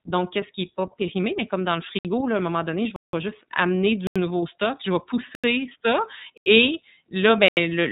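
Throughout, the speech passes through the iLBC codec at 13.33 kbps with 30 ms frames, coding each frame independently and cutting everything above 3.8 kHz. The result is plainly audible narrowband, slightly rough, synthetic speech.

A block of digital silence appears six times. The sound drops abruptly to nothing. The gaps fall at 1.99 to 2.05 s (60 ms); at 2.96 to 3.13 s (171 ms, which fits an 8192-sample block), between "un moment donné je" and "vais juste amener du"; and at 4.07, 5.35, 6.38 (just before "et là") and 7.48 s (just after "ça et là"). The last four gaps each last about 85 ms, consistent with 4096-sample blocks.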